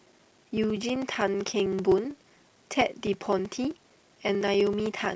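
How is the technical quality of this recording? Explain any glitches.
Not great: there's one fault, and it runs the whole way through. A block size mismatch (padded) leaves a short silent gap in every block, giving a steady 15.6 Hz buzz. The speech plays at 0.938 times normal speed but keeps its timbre, which fits 1024-sample blocks that are only partly filled.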